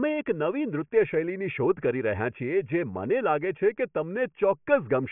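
No technical faults are audible anywhere in the recording.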